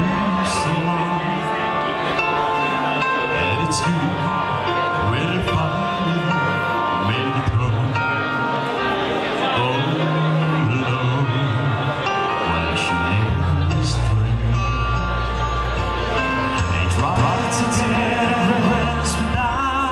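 At 17.16 s a doubled audio track appears and lasts until 18.84 s. A second copy of the sound plays about a fifth of a second behind, at roughly equal level. It enters and drops out abruptly, with no room colour. A slower second capture path is the likely cause.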